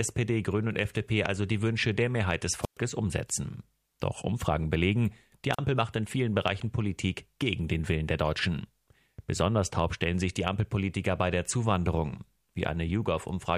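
At 2.62 to 2.77 s there's a wireless microphone squelch dropout. The radio link fades, hiss swells, and the receiver's squelch mutes everything for about 117 ms before the speech comes back. A shorter one at 5.53 to 5.59 s mutes for about 41 ms.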